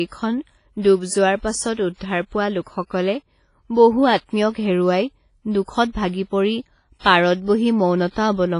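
From start to end, heavy damage of the kind WMA compression leaves is the likely cause, fitting a bitrate near 24 kbps. Long transform blocks smear quantisation noise over tens of milliseconds, so the speech rings and washes, hiss breathes with it, and nothing remains above 10.1 kHz.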